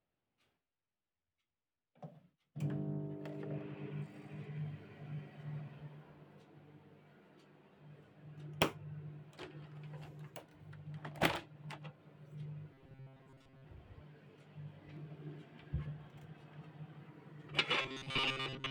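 The clip is a recording of everyday sounds, and it has two kinds of fault. Two sharp clicks sit at 8.03 s and 14.97 s. Each is a single crisp tick, a thin vertical line in the spectrum. They are likely dropped samples. Less than half a millisecond is missing each time. The waveform jumps straight to a later value, and that step is the click. Nothing audible is lost. The second fault runs from 12.74 s to 13.65 s and again from 17.82 s to the end. Here the sound turns into a hard, metallic buzz pitched at 133 Hz. It still loosely follows the original. This is likely robotic sound from repeated short buffers. Fresh audio arrives too rarely, so one chunk of about 7.5 ms is replayed over and over. That repetition rate sets the fixed 133 Hz tone. Most of the real audio in these spans is skipped.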